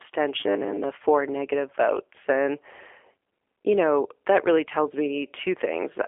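From start to finish the speech sounds thin and boxed-in, with a rough, synthetic edge on every syllable and nothing heard above about 3.6 kHz. This is G.729 codec damage: each 10 ms frame is rebuilt from a vocal-tract filter, a pitch predictor and a handful of pulses, so fine texture is lost. The narrow telephone band, roughly 300 Hz to 3.4 kHz, fits an 8 kbit/s G.729A link.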